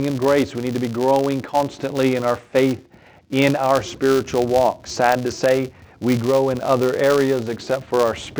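A filter restarted on every block runs through the whole clip, dropping its internal state at each block boundary and starting again from silence. Each restart leaves a small transient, and at 200 per second, which fits 5 ms blocks, these merge into a buzz that rises and falls with the sound's level.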